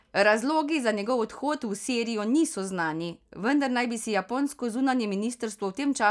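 Speech recording, with no technical faults to report.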